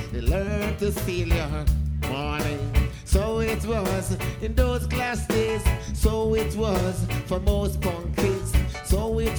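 From 0.48 to 1.2 s the sound jumps about 5% fast and nearly a semitone sharp, then snaps back, likely a drift correction step in clock-matching software.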